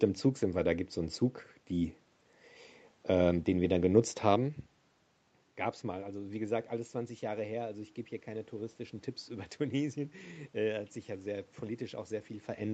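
Speech recorded over a call, with no technical fault to be heard. The sound stops at about 8 kHz, as expected from a wideband call path, with some room noise behind it and the talker's level shifting as they move around 4 s and again near the end.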